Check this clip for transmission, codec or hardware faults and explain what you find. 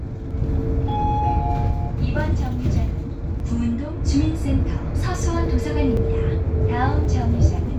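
There's one fault here, repeating five times as short clicks.

Dropped samples, at 0.31, 3.40, 5.15, 5.97 and 7.05 s: each is a single sharp click. The likely cause is a tiny gap, well under a millisecond, where the waveform jumps straight to a later value. That step makes the tick, though nothing audible goes missing.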